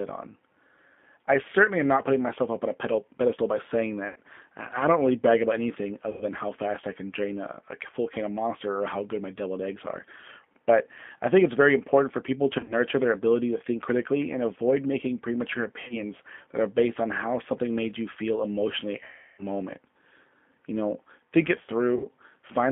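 The whole clip goes through a G.729 codec, which fits an 8 kbit/s G.729A call. The line band runs from 200 Hz to 3.5 kHz, and the speech is rebuilt from a filter, pitch predictor and sparse pulses, so it comes out plainly rough and synthetic.

On top of that there's VoIP packet loss concealed by the speech codec at 4.08 s (just after "a pedestal by saying"), 6.11 s, 12.59 s (after "important for people to"), 15.82 s, 19.04 s and 21.96 s (after "know think it"). The losses run 80, 100, 70, 70, 340 and 80 ms. At 12.59 s and 15.82 s they're scattered, with runs of at most 50 ms. Each time, the decoder stretches its last pitch and filter into a fading buzz or coloured noise, and the sound stays off briefly once packets return. The 340 ms gap at 19.04 s is the longest.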